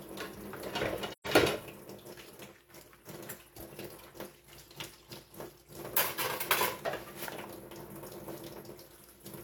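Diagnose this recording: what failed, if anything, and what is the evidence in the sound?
The failure is in the codec stage: AAC frame loss with muting. From about 1.12 s to 1.27 s the sound fades out, drops to nothing, then fades back in. The gap is roughly 128 ms, which fits about three lost frames. The decoder had nothing for those frames, so it zeroed their spectrum. Because AAC frames overlap, the neighbouring windows taper into and out of the silence, which gives the hole its soft edges.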